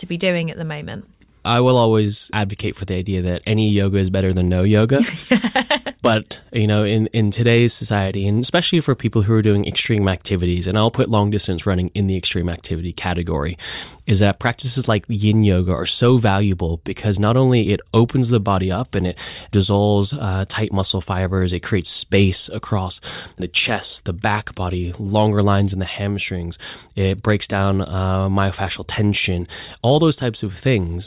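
No technical faults can be heard anywhere in the recording. The speech continues without any interruption or disturbance in the signal.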